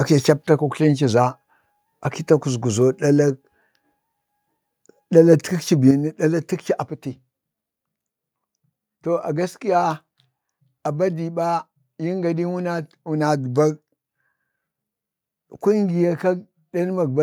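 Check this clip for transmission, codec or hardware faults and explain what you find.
One fault is present. At 5.91 s there is a microphone volume step-down: the speech and the background behind it drop together by about 6 dB in a single abrupt step and stay at the lower level. The likely cause is the call software reducing the microphone's input gain at the device after judging the level too high.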